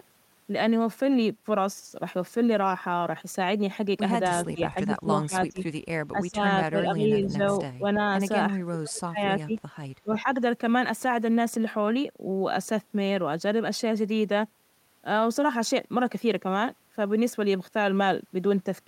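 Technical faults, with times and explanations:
4.46–5.59 s, 6.11–6.39 s, 6.70–7.97 s, 8.52–9.54 s, 10.03–10.27 s, speech suppressed in double talk: the talker keeps dipping in level, by about 10 to 25 dB at worst, most deeply around 8.5–9.5 s. That's likely an echo canceller ducking everything while both ends talk at once.
4.80–4.87 s and 7.22–7.29 s, echo leak: short scraps of a delayed copy of the talker come back about 345 ms late, roughly 20 and 15 dB below the speech. That's likely a speakerphone end whose canceller didn't fully scrub its mic pickup.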